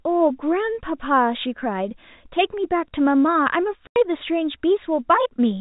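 Packet loss filled with silence punches a 90 ms hole into this speech at 3.87 to 3.96 s. The lost audio was replaced by dead air, a gap consistent with three 30 ms packets, and its edges are abrupt. Throughout, the sound stays within the narrow 4 kHz telephone band of G.711 coding.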